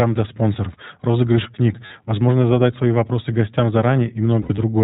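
Throughout, the speech carries the iLBC codec's mark: nothing reaches above 4 kHz, and the voice sounds clear but slightly rough and synthetic. This is plainly audible. It fits iLBC's 20 ms frame mode at around 15 kbps. A simple low-pass filter would only dull the top end. Here the coarse excitation coding also leaves a grainy, artificial texture inside the band, which points to this codec rather than mere bandwidth limiting.

From 1.86 to 1.92 s, lost iLBC frames leave a 40 ms gap, consistent with two missing 20 ms frames. The decoder fills it by repeating the last pitch cycle with added noise, so the gap sounds like a briefly held, slightly buzzy vowel. Lost frames in other decoders might leave plain silence or a click. A second, heavier patch runs from 4.42 to 4.60 s: about 100 ms missing, scattered over 160 ms, with the longest run roughly 70 ms. In that run the held sound fades. After each gap the voice snaps back almost at once, because iLBC frames don't depend on earlier ones. 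That quick recovery sets it apart from codecs whose errors smear on for a while.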